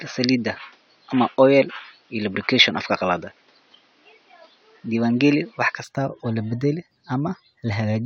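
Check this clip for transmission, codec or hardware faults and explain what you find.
One fault is present. From the start to 5.84 s, the input was likely switched to a poorer device. That device passes nothing above 6.3 kHz and adds a faint noise floor around 40 dB down, so the speech sounds dull and boxy until it clears abruptly, with no gap and no level jump.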